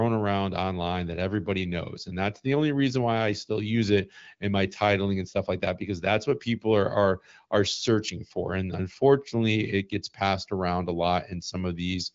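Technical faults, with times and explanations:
No technical faults are heard in the speech, so there are no times or explanations to give.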